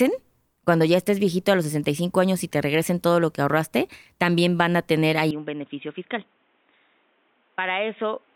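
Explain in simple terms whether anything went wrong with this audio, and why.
From 5.31 s, after "también van a tener", speech goes muffled, quieter and picks up new background noise: likely an input switched to a poorer device, not filtering.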